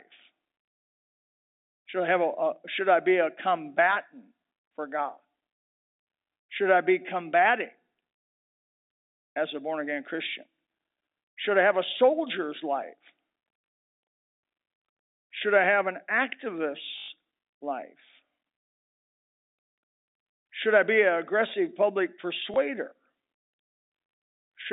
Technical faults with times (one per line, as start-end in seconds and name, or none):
16.98-17.08 packet loss with last packet repeated
22.54 packet loss with last packet repeated